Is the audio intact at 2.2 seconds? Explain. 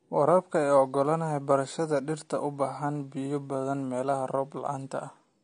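No. At 2.2 seconds, as throughout the clip, the speech is dull, with nothing above 9.7 kHz and a plainly audible smeared, fizzy texture on sibilants. The likely cause is AAC compression, with AAC-LC quantising coarsely at a rate consistent with about 32 kbps.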